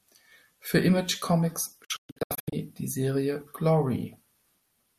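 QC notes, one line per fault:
1.84–2.53 s, digital broadcast dropout: the speech falls into several short silent holes, the longest 120 ms, totalling 432 ms over 672 ms, each muted with an 8 ms fade. The receiver silenced failed frames, so unlike packet-loss concealment nothing is repeated or smoothed over.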